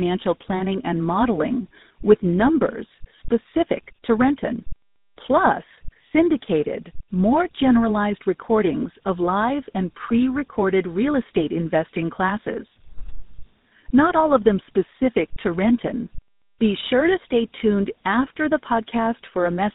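Throughout the speech, tandem speech coding from two codecs in a row, ending in GSM full rate, re-encodes already degraded audio, leaving it rough, warbly and muffled, with nothing above 3.8 kHz.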